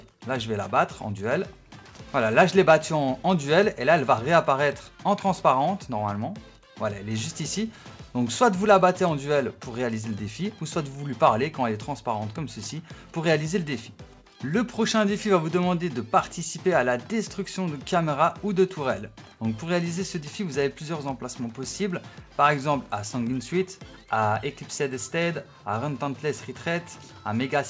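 No technical faults can be heard; the audio has passed through a wideband call codec that leaves nothing above 8 kHz, consistent with G.722 at 64 kbps, and the only other trace of that path is its ordinary low-level coding noise.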